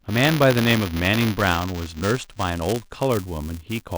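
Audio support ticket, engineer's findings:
Buffer tearing, whole clip. A 200 Hz robotic buzz rides on the speech and stops in pauses. Writer and hardware reader crossing in the ring buffer every 5 ms period. A sliver of each period repeats audio from about 15 ms earlier, with hard joins.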